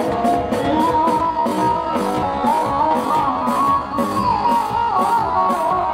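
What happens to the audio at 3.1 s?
At 3.1 s the audio sits inside a time-stretched section running from 1.19 s to the end at 5.94 s. It plays at about 0.54 times its original pace with pitch unchanged, likely from software repeating short segments to lengthen it, so it sounds dragging.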